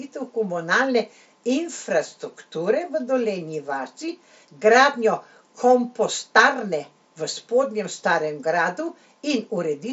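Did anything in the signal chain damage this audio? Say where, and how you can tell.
No, nothing stood out on listening, and the speech simply stops at about 7.7 kHz as expected from a Bluetooth mSBC headset path working normally.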